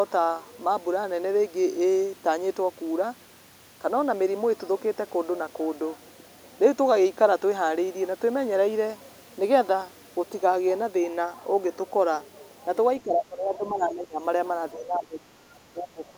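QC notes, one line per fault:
13.03–14.2 s, 14.73–15.53 s and 15.73 s to the end, speech suppressed in double talk: the talker's level sags in patches across all three stretches, about 10 dB down at worst in the first and closer to about 20 dB in the last two, with the final one running right to the end of the clip. It's likely the echo canceller hearing both sides at once, failing to tell the talker from the loudspeaker return, and ducking everything.
13.11–13.18 s and 13.83–13.87 s, other side's voice leaking through: two brief scraps of a second voice sit under the talker, the first at about 25 dB below the speech and the second fainter at about 30 dB below. Both are short fragments rather than sustained bleed. They land inside the first suppression stretch, so they're likely loudspeaker pickup that the echo canceller didn't fully strip out while it was struggling with the overlap.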